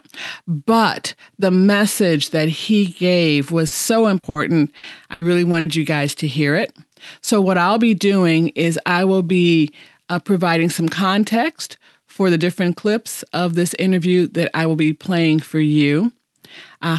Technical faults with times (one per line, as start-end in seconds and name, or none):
3.67-3.73 short concealed packet loss
4.19-4.25 short concealed packet loss
4.29-4.37 burst of packet loss
4.77-5.67 repeated packet loss (robotic sound)